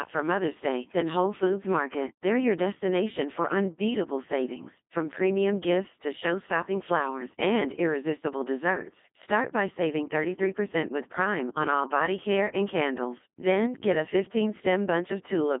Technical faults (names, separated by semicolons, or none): Codec 2 vocoder